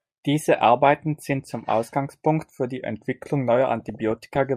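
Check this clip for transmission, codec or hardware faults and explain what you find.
Two faults are audible in this speech clip.

From 2.78 to 3.48 s, a drift correction step likely slowed playback about 5%, dropping pitch roughly 95 cents together, then snapping back, unlike wow's gradual wander.

From 3.80 to 4.38 s, DAB burbling: bit errors near half a percent corrupt sub-band levels frame by frame, giving short noise blips and level jumps in single sub-bands rather than clean dropouts.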